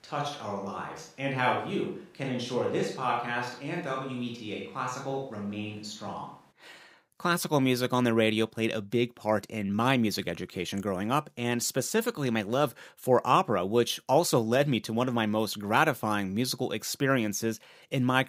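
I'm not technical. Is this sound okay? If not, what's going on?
No. From the very start until about 6.5 seconds, the speech sounds roomy and hollow, thinner in the low end, a bit quieter, and with more background noise. This is a switch to a distant microphone, most likely because the close microphone's signal was missing and one farther away was used. What sets it apart from a simple volume dip is the abrupt change at 6.5 seconds, where the speech suddenly becomes close, full and clear.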